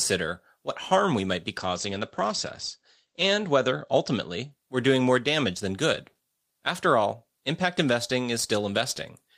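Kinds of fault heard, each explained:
call bitrate drop: The call's bandwidth estimate fell, so the encoder went from 32 to 14 kbps and narrowed its band from 20 kHz to 8 kHz. From 1.58 s, after "harm we might be", speech sounds coarser and duller, bottoming out for 1.77 s, then clears by 4.57 s.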